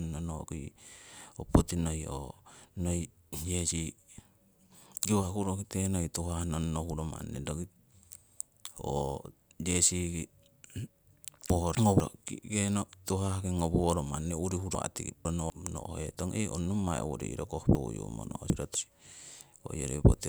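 Chunks out of order occur at 11.5–12.0 s, 14.75–15.5 s and 17.75–18.75 s. Each time a 250 ms block plays one, two, then three blocks late, so the speech jumbles. The waveform and spectrogram show abrupt vertical seams where the formant tracks break and resume mismatched.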